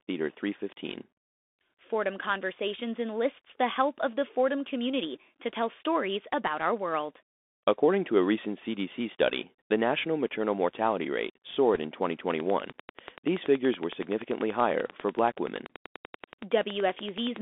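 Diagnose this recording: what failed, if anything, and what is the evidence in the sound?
Codec stage: the Bluetooth CVSD headset codec runs throughout. The speech is confined to roughly 250 Hz to 3.6 kHz, with a granular hiss and scratchy s sounds. This fits a 64 kbps one-bit delta coder that can't keep up with fast high-frequency movement.

Radio link stage: bit errors on the Bluetooth voice link cause a brief rushing crackle from 11.74 to 11.79 s, with no hard clicks. The error rate is under one percent, and each flipped step bit fades out rather than spiking.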